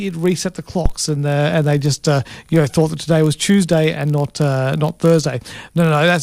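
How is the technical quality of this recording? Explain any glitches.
The recording has two faults: a steady buzz running through the whole clip, and one brief low thump near the start.

Throughout, a block size mismatch (padded) adds a buzz at 46.9 Hz. Each 1024-sample block read downstream is only partly filled, and the remainder is zero-padded, leaving a tiny gap every block. At 46.9 Hz this fits a 48 kHz stream. Unlike mains hum, which sits at 50 or 60 Hz, the buzz follows the block rate, and the speech runs at 0.999 times normal speed with its timbre unchanged.

From 0.86 to 0.94 s there is a phantom power thump. Switching a supply on a live input sends a voltage step through the coupling capacitors, producing a deep thud that dies away within about 20 ms. Unlike a plosive, it is electrical. It has no breath noise, and it doesn't line up with the shape of the speech around it.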